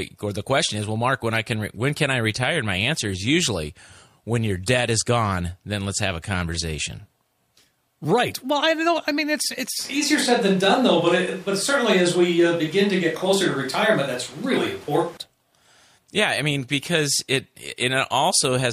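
From 9.79 s to 15.17 s the speech turns abruptly roomy and hollow, with thinner bass. This is a switch to a distant microphone, likely after the close microphone's signal dropped. Loudness holds steady, but room noise sits only about 25 dB below the speech. A spectrogram shows weakened lows and filled-in pauses.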